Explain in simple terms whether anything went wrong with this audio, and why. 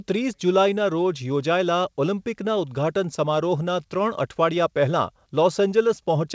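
Nothing went wrong: the recording came through an ordinary internet call connection without any glitches, and the lack of any sound above about 8 kHz is simply the normal limit of that kind of call rather than damage.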